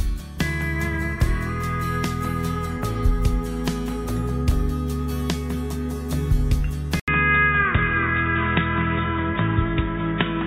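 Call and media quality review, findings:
At 7.00 s, 80 ms dropout, then sound goes dull to the end, nothing above 3.8 kHz, faint new noise floor, level about the same. Likely input switched to a poorer device.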